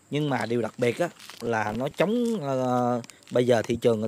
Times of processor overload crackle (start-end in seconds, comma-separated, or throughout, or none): 1.46-1.92